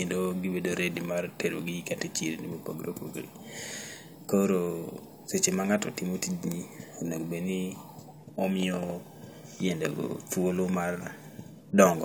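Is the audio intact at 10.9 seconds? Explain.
Yes, the audio at 10.9 seconds is intact, with no dropout, distortion or other fault at that moment.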